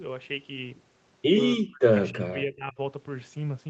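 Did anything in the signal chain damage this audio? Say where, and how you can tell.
Yes: speech suppressed in double talk at 1.56–1.83 s and 2.11–2.79 s, dipping by up to about 40 dB. The call's echo canceller likely ducked overlapping talk.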